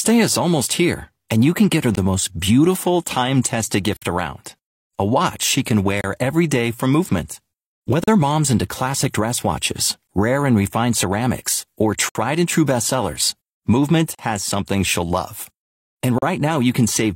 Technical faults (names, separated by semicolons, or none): gap between stream segments